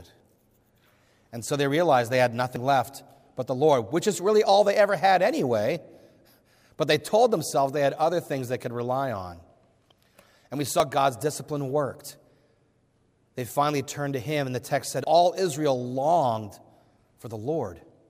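At 2.56, 10.8 and 15.04 s the sound jumps. Likely dropped buffers from overrun. Roughly 40, 40 and 70 ms vanish, spliced without silence.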